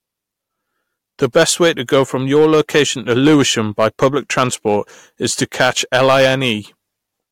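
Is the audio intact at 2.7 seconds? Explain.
No, hard clipping runs through the whole speech clip, 2.7 s included: the signal is driven about 8 dB past what the stage can pass, so a small share of peaks are sliced flat, giving crackle on loud syllables. Unlike gentle saturation, the edge is abrupt and gritty, with bright high harmonics.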